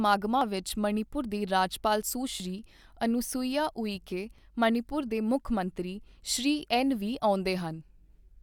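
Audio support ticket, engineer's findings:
Micro-skips in speech at 0.41, 2.40, 4.38 and 6.37 s, recurring roughly every 2 s. Overlap between stream segments: adjacent 2 s segments carry overlapping timestamps, and the player trims the overlap from audio that wasn't actually duplicated. Each cut drops a few milliseconds (about 5 to 13 ms here), so the waveform jumps discontinuously at every segment boundary. Component: segmenter/packager timestamping or player-side splice logic.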